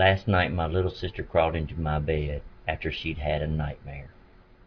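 No technical faults are audible anywhere in the recording.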